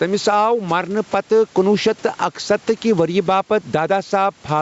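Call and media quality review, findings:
Gain pumping, throughout the speech clip. Gain swings around 10 dB. Dynamics squashed. Likely input gain set too high, with a fast limiter clamping every peak and releasing between them. Room noise, about 37 dB below speech. Call microphone processing is audible as nothing above 8 kHz and thin lowest bass.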